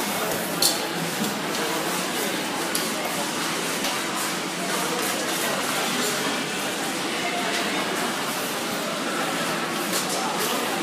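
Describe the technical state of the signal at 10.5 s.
At 10.5 s the signal is intact, with no technical fault present at that moment.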